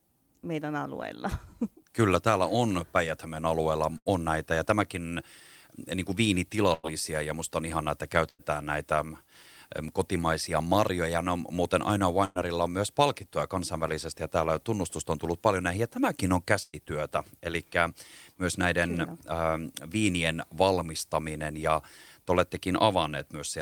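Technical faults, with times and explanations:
3.97–8.42 s, scattered short gaps: about three small holes, where packets were lost or arrived late, sit across this stretch. The receiver bridged each by extending the last sound, concealing roughly 300 ms in total, about 7% of the span. The longest single gap is about 100 ms. Each patch is heard as a brief tick, smear or dropout. Net speech lost here is 180 ms, so the words resume slightly further on than where they broke off.
4.09–10.00 s and 13.26–17.11 s, jitter buffer speed-up: the buffer held more audio than its target, so the receiver trimmed short pitch-period-sized pieces repeatedly to reduce delay. Roughly 100 ms was removed in each stretch, giving speech at 101% and then 102% speed with pitch unchanged. At these rates the pace is only marginally quicker, below the point where it would sound hurried.
12.25 s and 16.63 s, burst of packet loss: consecutive packets went missing, and the receiver filled 102 ms and then 106 ms by continuing the last sound and fading it down. 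The result is a held buzz on voiced sound or a fading hiss on other sound. In each case 60 ms of speech is missing. Playback delay shifts by 42 ms and 46 ms, and the second fill ends in 20 ms of silence. The second burst falls inside the later speed-up stretch.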